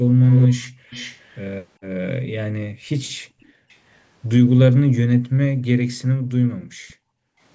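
Speech recorded on a call, with two echo-canceller problems. First, there's an echo leak. A copy of the voice trails about 0.4 s behind, most obviously from 0.26 to 1.38 s at roughly 15 dB under the speech, with much fainter scraps at 3.41 to 3.76 s and 6.88 to 6.94 s. The likely cause is a far-end loudspeaker whose canceller didn't fully remove what its mic picked up. Second, the background is gated by the echo canceller. The room sound gets ducked while the loudspeaker plays: a dip of about 21 dB at 0.68 to 0.87 s, then drops of about 40 dB at 1.79 to 1.91 s and 2.69 to 3.7 s, and on and off for around one and a half seconds between 5.22 and 7.4 s.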